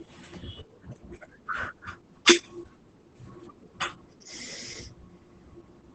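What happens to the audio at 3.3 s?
At 3.3 s the speech carries Opus voice compression, present through the whole clip. The linear-prediction coder keeps the band below 8 kHz and codes the excitation coarsely, fitting about 12 kbps, so the speech sounds muffled and slightly hoarse. A spectrogram shows an empty region above 8 kHz and smeared harmonics.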